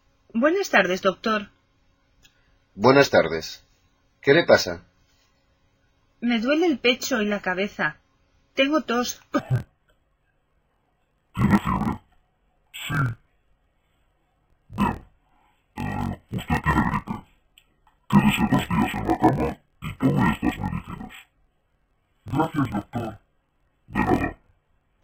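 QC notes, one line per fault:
9.39 s to the end: interleaved audio read as planar. Each 23 ms block, which fits a 1024-sample block, has its alternating left and right samples split into halves played together at half speed, dropping the sound an octave, doubled and choppy at a 43.1 Hz block rate.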